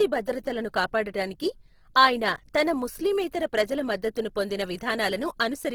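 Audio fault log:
throughout: Opus compression. The speech has a plainly audible rough, grainy texture, with tonal parts turned noisy rather than swirling, and content still reaching about 20.3 kHz. This is likely Opus in its fullband music (CELT) mode at a low rate, fitting roughly 16 kbps. It keeps each band's energy but refills starved bands with noise or folded lower bands. A spectrogram shows few holes but smeared, speckled upper harmonics in place of clean lines.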